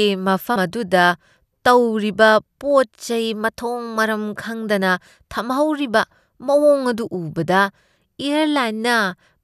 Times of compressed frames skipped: 0.55

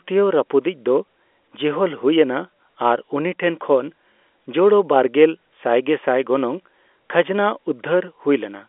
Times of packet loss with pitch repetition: none

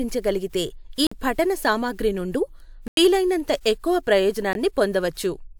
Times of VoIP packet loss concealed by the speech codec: none

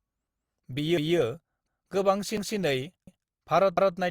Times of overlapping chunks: 0.97-1.17, 1.67-1.87, 2.37-2.57, 3.07-3.27, 3.77-3.97

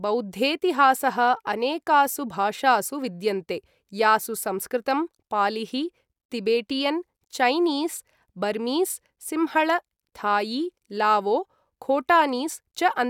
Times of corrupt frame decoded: none

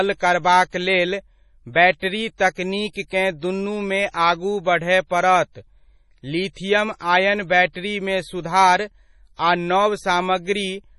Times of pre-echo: 1.73-2.02, 2.93-3.11, 4.09-4.14, 6.53-6.56

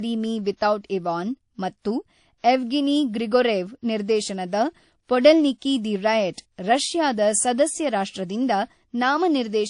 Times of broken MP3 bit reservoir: none

